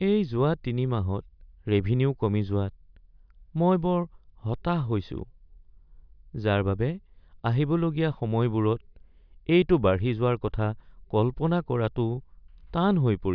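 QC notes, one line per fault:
No faults stood out on listening to this speech clip.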